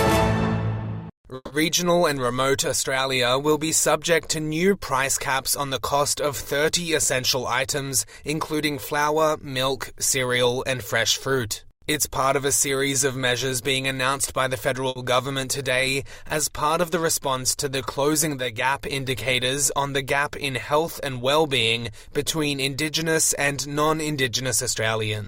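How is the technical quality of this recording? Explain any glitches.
The recording has network-related timing faults: one freeze, one brief stall, and two stretches where playback speeds up to catch up.

From 1.35 to 1.52 s there is a call audio freeze. The last sound is held and smeared into a fading buzz for about 150 ms. Then there are about 30 ms of silence. Nothing is lost. The sound resumes exactly where it stopped. The likely cause is packets held up in transit, which drained the jitter buffer. That added about 150 ms of delay.

From 7.14 to 9.40 s there is a jitter buffer speed-up. Playback runs about 6% fast, with no change in pitch, so the passage sounds slightly hurried. The receiver is trimming tiny pitch-period slices, roughly 150 ms in total, to shed built-up delay. A second speed-up runs from 19.49 to 20.84 s at about 5% fast. It removes roughly 70 ms.

From 14.89 to 14.98 s there is a short stall from a late packet. 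One packet was not there when due, and the buffer ran dry. The receiver stretched the last sound for about 70 ms until the packet arrived. It then carried on from the same point. Nothing is missing. You hear a sound held a little too long, with a slight buzz or dip. The stall adds about 70 ms of delay.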